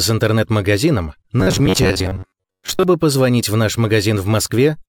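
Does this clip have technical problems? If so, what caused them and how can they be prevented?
Yes. From 1.41 to 2.83 s the sound becomes a rigid, metallic buzz near 94 Hz: robotic sound from repeated short buffers. Audio likely arrived too seldom, so an 11 ms segment was looped for about half that stretch. Larger buffers or more processing headroom prevent it.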